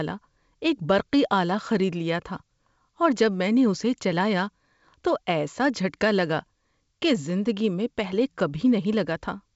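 No faults are audible; the speech comes through a normally working G.722 wideband telephone coding path, with the top of the band stopping at about 7.7 kHz.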